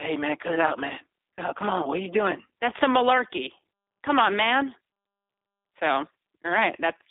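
From start to finish the speech carries G.729 codec damage, plainly audible. The codec rebuilds each 10 ms frame from a vocal tract filter, a pitch predictor and a handful of pulses rather than the waveform itself, which fits an 8 kbit/s G.729A stream. The result sounds rough and slightly synthetic. The line band runs from about 250 Hz to 3.7 kHz, with nothing above 3.8 kHz, so sibilants and breath lose their brightness.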